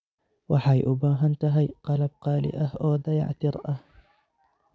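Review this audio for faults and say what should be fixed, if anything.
Nothing stood out on listening to this speech recording, so there is nothing to fix.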